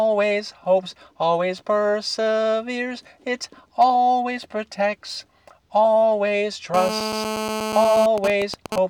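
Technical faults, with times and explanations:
6.74–8.06 s: GSM phone buzz. A 2G phone in a call nearby transmits its radio bursts at about 217 Hz, and the audio circuit rectifies them. The result is a hard, raspy 217 Hz buzz rich in harmonics, steady for the call and sitting about 6 dB below the signal, unrelated to it.
8.18–8.78 s: GSM signalling bursts. The phone's user falls silent in the call, so only short groups of radio bursts are sent. Rectified in the audio path, they give even ticks with a longer 217 Hz buzz twice a second, roughly 5 dB below the signal.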